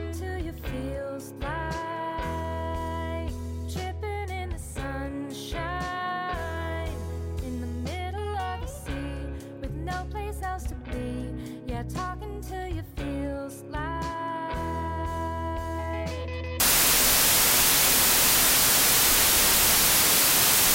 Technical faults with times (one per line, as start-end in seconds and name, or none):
16.60-20.75 wrong sample width